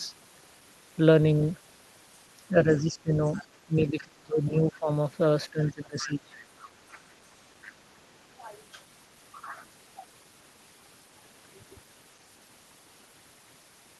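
From 2.5 to 4.89 s the talker's level dips and breaks up, falling by about 25 dB at its deepest, with roughly one and a half seconds affected in total. This is speech suppressed in double talk, likely from the echo canceller turning down both voices while the far end spoke at the same time. Inside that stretch, brief scraps of the other side's voice leak through at 3.32 to 3.45 s and 3.99 to 4.03 s, about 20 and 25 dB below the speech. The suppression returns from 5.52 to 6.35 s, reaching about 20 dB down, with a louder leak at 6.0 to 6.1 s, only about 15 dB below the talker. Further fragments of the far voice follow at 6.93 to 7.13 s and 7.65 to 7.7 s, and a last, shallower dip of about 15 dB runs from 7.68 to 8.22 s. The leaks are likely residual loudspeaker echo that the canceller failed to remove from the microphone.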